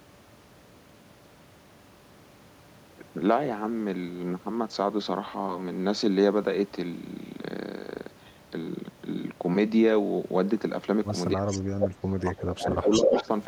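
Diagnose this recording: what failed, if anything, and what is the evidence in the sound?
Call processing is where this goes wrong, starting at 11.35 s and running to 13.3 s. The speech dips hard in that stretch, at its worst by roughly 20 dB, with about a second and a half of it pulled down in total. That pattern is most likely speech suppressed in double talk: with both ends talking at once, the echo canceller couldn't tell the near talker from loudspeaker echo and turned the whole lot down.

There's echo leak in the same window, also from the call-processing stage. A quiet delayed copy of the speech shows up from 11.48 to 11.59 s, roughly 15 dB under the direct sound and trailing it by 336 ms. A louder burst from 12.91 to 13.24 s sits about 5 dB above the speech, 342 ms late. The likely cause is a speakerphone end whose canceller didn't fully remove what its mic picked up, so that the leftover came back down the line.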